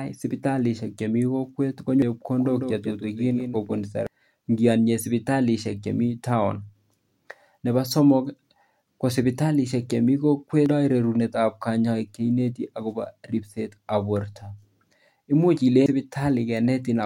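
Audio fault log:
2.02 s, 4.07 s, 10.66 s, 15.86 s: damaged data in a compressed stream. At each point some bytes of the encoded stream were corrupted, so the decoder misread or rejected the affected frames, lost sync and skipped ahead to the next valid frame header. Each one is heard as a chirp, squawk, click or short hole. They fall right after "sibitalishek chemii kokwet", just before "ngeanye sibitalishek", just before "rerunet ab kanyaiset akobo", and near the end.
2.39–3.81 s: doubled audio track. A second copy of the speech is mixed in, most likely picked up again through a slower path. It trails the original by roughly 150 ms and is about 5 dB quieter. It covers the full band with no decay or room colour, so it sounds like a dry, flat echo rather than reverberation. It starts and stops abruptly at the edges of this span.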